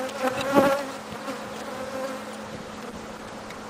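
At 2.44 s a call bitrate drop sets in and lasts to the end of the clip. The encoder's rate falls from 64 kbps to 13 kbps and stays at that floor for about 1.26 s, so the sound is coded far more coarsely and its high frequencies are cut away, leaving it muffled and watery. Packet loss produces brief dropouts or repeated fragments, but this degradation is continuous, with no gaps or stutters.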